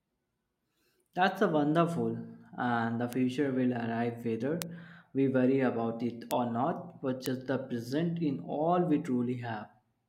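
At 3.13 s (after "and the"), 4.62 s, 6.31 s (after "we worry about it") and 7.26 s (before "the present in all"), bit error spikes appear: a flipped bit briefly throws a sample or two by a power of two, peaking at about −13 and −7 dBFS. Each is a sharp tick, a one- or two-sample needle on the waveform and a thin full-height vertical line on the spectrogram.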